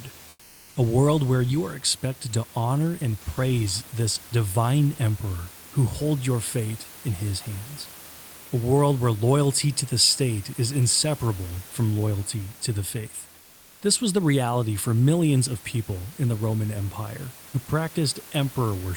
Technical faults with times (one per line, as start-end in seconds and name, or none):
0.29-0.75 comfort noise in place of the background